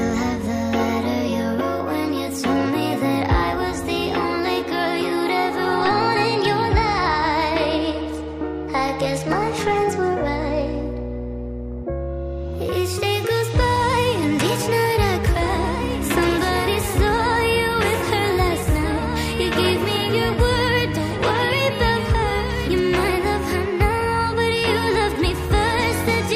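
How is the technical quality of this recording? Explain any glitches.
One glitch stands out: a doubled audio track from 15.24 s to 22.80 s. A second full-band copy of the sound runs about two seconds behind the original and roughly 10 dB quieter. It is likely caused by the audio being captured again through a slower path, or by an edit leaving two copies out of step. Unlike a room echo or reverb, the copy has no decay and no added room colour, and it appears and vanishes abruptly.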